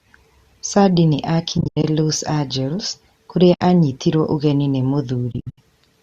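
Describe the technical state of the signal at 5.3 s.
From 5.32 to 5.58 s, just after "ũgeni nĩ", there is AAC frame loss with muting. About 190 ms of lost frames are scattered over 260 ms, the longest gap roughly 70 ms. The decoder zeroes them, and overlapping windows fade each hole in and out, so it drops softly.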